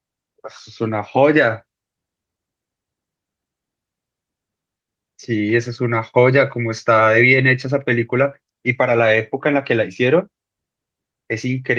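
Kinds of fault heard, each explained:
Nothing stood out on listening to this speech recording.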